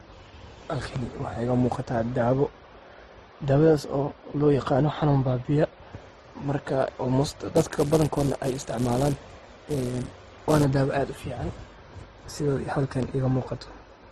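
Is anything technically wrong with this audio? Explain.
Yes, there are two faults in this speech recording.

Throughout, the signal shows the combined damage of more than one lossy encoding stage, most likely transcoding between lossy codecs: a low-rate Opus-style encode followed by a moderate-rate MP3 encode. The second encoder wastes bits reproducing the first one's artefacts and adds its own, so two flavours of artefact sit on top of each other, and nothing survives above about 14.6 kHz.

From 7.56 to 10.65 s, a filter is restarted on every block. It discards its memory at each block boundary and begins again from silence, so every block opens with a small transient. These arrive at 345 Hz, which fits a 128-sample block, and they are heard as a steady buzz riding under the speech that grows and fades with its loudness.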